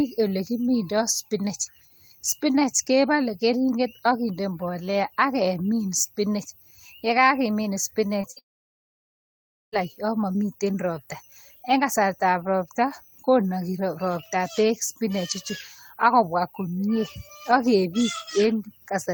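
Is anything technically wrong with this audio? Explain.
Yes. Packet-loss problems cluster around 8 to 10 s of this speech clip, ending in a long gap.

Just after "mbolea akemin spinach yekakemin", short concealed packet loss occurs twice, at 8.07 to 8.11 s and 8.21 to 8.25 s. Each time about 20 ms failed to arrive, and the receiver extended the preceding sound to bridge it, leaving a brief smear or wobble.

At 8.31 to 8.38 s comes a burst of packet loss. Roughly 40 ms went missing in a row, so the decoder stretched the last sound for about 50 ms while fading it, giving a short held buzz or hiss before playback jumps ahead.

From 8.38 to 9.81 s the sound drops out for about 1.3 s of near silence, most likely a long network dropout. No audio was played for that stretch, and when it resumes, everything in between is missing.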